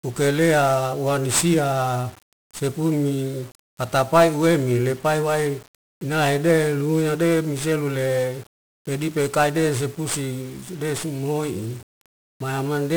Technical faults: 1-bit DFPWM compression

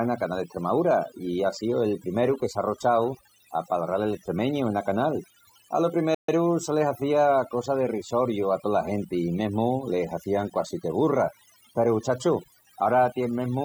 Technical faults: overdone noise removal; playback stall

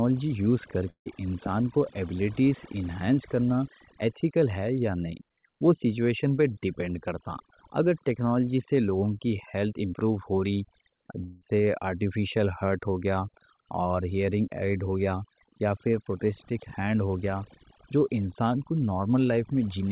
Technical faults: overdone noise removal; long network dropout

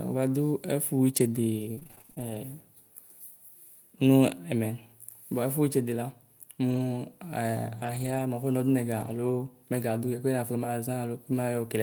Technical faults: repeated packet loss (robotic sound); lost packet rebuilt from error correction

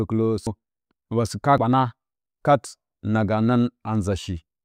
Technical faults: compressed frames skipped

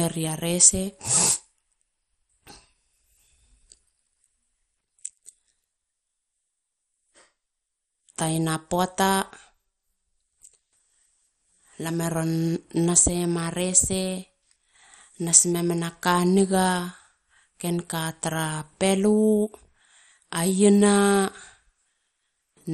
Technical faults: MP2 compression

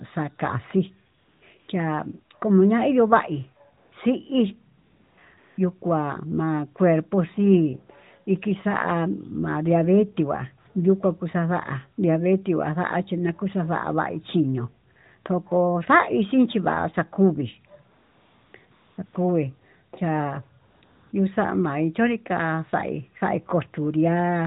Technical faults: AMR comfort noise

